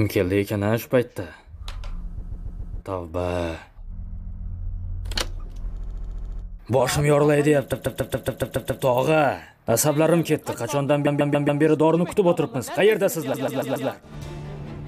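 Repeated frames stutter at 2.21, 4.02, 5.78, 7.71, 11.06 and 13.33 s. A short block of 139 ms (70 ms at 5.78 s) replays several times, adding time.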